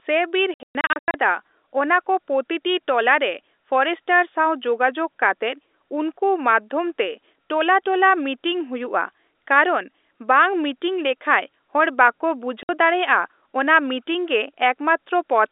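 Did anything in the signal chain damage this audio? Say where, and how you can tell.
Yes, at the network: packet loss filled with silence chops hard-edged holes into 0.54–1.14 s (about 390 ms missing, runs up to 120 ms) and 12.63–12.69 s, sized like 30 ms packets.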